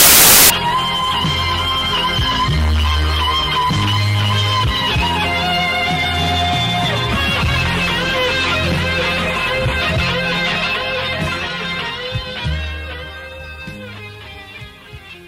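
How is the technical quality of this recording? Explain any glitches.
One glitch, at the very start. From 0.0 to 0.5 s, samples built from the wrong bytes: misassembled sample bytes turn low bits into large values, giving loud broadband noise, a full-band smear on a spectrogram and a dense, oversized waveform block.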